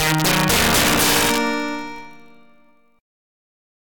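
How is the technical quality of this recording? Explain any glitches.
The technical quality is poor, with two faults: a block-rate buzz throughout and integer overflow near the start.

Block size mismatch (padded) runs the full length. One stage delivers slightly short blocks to a stage that reads them in full, and the shortfall is filled with zeros. The result is a tiny silent notch in every block and a steady buzz at 46.9 Hz, which fits a 1024-sample read at 48 kHz. Because the padding is so small, the audio runs only 0.999 times as fast, with no audible slowdown. Unlike mains hum, this buzz comes from periodic dropouts rather than a tone mixed in, so it has a gritty, chopped edge instead of a smooth hum.

Integer overflow affects the audio from 0.0 to 1.38 s. A gain or sum stage is pushed about 9 dB past its integer limit, and instead of holding at the maximum, each peak wraps to the opposite extreme. 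The loudest moments therefore produce violent, snapping cracks. This is what separates it from ordinary clipping, which flattens peaks into a fuzzy, compressed distortion. Here the waveform jumps across the full range, so the damage sounds far harsher and more abrupt.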